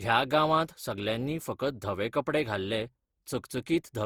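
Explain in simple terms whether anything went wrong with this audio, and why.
Generation loss runs through the whole clip, from start to finish. The speech sounds swirly, smeared and hollow, and the starts of sounds are blurred. The likely cause is that the recording was squeezed down and unpacked again about seven times, with a codec that sounds like Opus. Each round cut the sound into slightly different slices and threw away a little more detail, so the small errors piled up.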